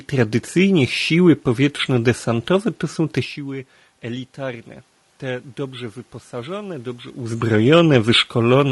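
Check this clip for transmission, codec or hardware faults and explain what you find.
One codec fault runs through the whole clip, and it is plainly audible.

Throughout, the speech carries the marks of low-delay AAC compression, likely AAC-ELD, the video-call codec, at a rate that fits about 32 kbps. Its low-delay window codes about 500 frequency lines a frame, and the low rate starves them of bits. The voice therefore sounds rough and grainy, with noise filling the gaps between harmonics and a dulled, somewhat synthetic top band. The room noise in the background and the level changes near 3 s and 7 s, where the talker shifts position, come from the recording itself.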